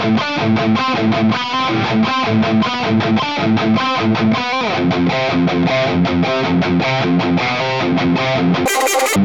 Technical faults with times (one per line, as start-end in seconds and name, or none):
8.66-9.16 wrong sample rate